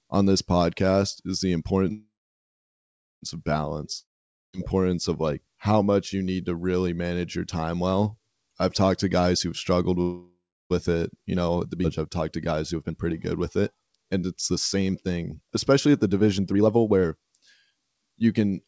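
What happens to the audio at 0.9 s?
Nothing goes wrong at 0.9 s: the speech there passes intact through the WebRTC call path, whose band stops at 8 kHz as G.722 coding at 64 kbps would give.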